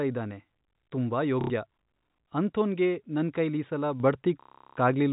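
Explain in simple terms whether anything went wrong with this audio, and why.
Two things went wrong. The first is packet loss with the last packet repeated. Around 1.41 to 1.5 s, and again for longer from 4.41 to 4.77 s, chunks of audio never arrived, so the receiver kept replaying the last piece it had. Those repeats don't line up with the natural rhythm of the voice, so the run turns into a robotic, buzzy stutter. The buzz fits pieces about 30 ms long.

The second is a sudden gain jump. At 4.0 s the whole thing gets louder in an instant, voice and background together, with no gradual fade, and it stays that way to the end. The likely cause is a volume setting being applied in one step instead of being eased in smoothly. The telephone-style coding itself just sounds like ordinary phone-line audio, with nothing high-pitched getting through.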